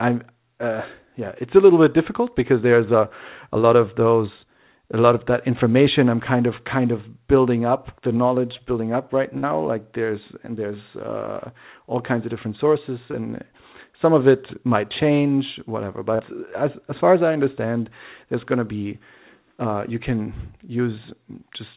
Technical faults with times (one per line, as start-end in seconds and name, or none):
9.38-9.45 burst of packet loss
13.11-13.15 short concealed packet loss
16.15-16.21 short concealed packet loss